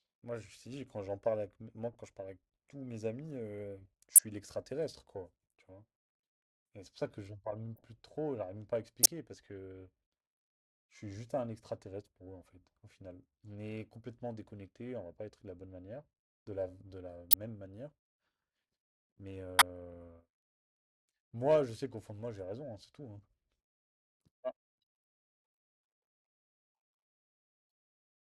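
Corrupt frames are decoded at 1.92–1.95, 4.16–4.20, 7.76–7.83, 9.03–9.06, 17.31–17.43 and 19.59–19.62 s. Flipped bits across a few compressed frames misplace energy in the speech, producing brief chirps and noise bursts.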